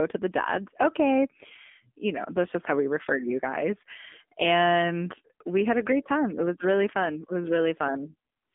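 AMR narrowband mobile codec runs throughout: nothing above 3.7 kHz survives, and a plainly buzzy, synthetic vocal-tract rebuild points to a low 7.4 kbps mode.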